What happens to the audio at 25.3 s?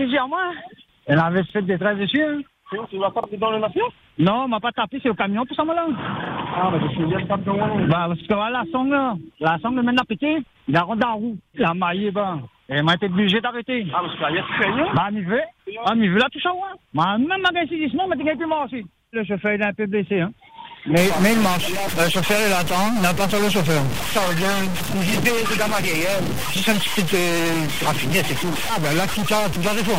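At 25.3 s you're in the middle of a stuck bit fault that starts at 20.97 s and runs right to the end. One bit of the sample data seems pinned at a fixed value, likely from a broken data line or converter, so roughly half the samples land off by a step of around -20 dBFS. You hear it as harsh, buzzy distortion, and the quiet stretches fill with a fairly loud hiss instead of going silent.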